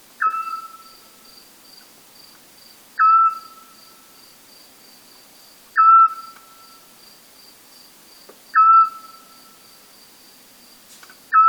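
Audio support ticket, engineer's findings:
No faults found on listening; nothing in the audio path calls for action on this ticket.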